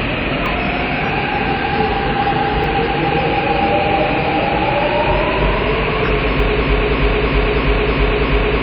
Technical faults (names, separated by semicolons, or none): WMA compression; dropped buffer (overrun); broken-record loop